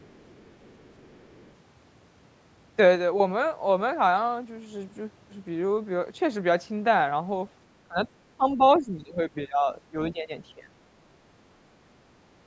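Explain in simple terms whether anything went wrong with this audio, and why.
Two things went wrong. First, the other side's voice is leaking through: a very faint second voice sits under the sound from 0 to 1.5 s, with another brief scrap at 8.74 to 8.79 s. It is an actual voice, not steady hiss. The likely cause is that the loudspeaker's sound was not fully cancelled.

Second, the speech is suppressed in double talk. The talker's voice dips at 7.88 to 8.08 s, 8.37 to 10.33 s, and 10.54 to 10.71 s, while both sides talk at once. The voice is turned down in patches rather than cut to silence, which is likely the echo canceller's doing.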